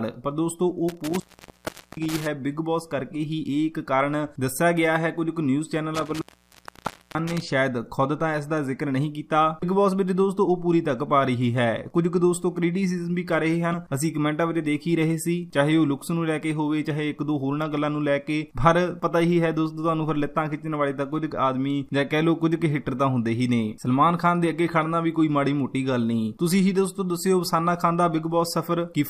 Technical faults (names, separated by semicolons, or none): intermittent contact; damaged data in a compressed stream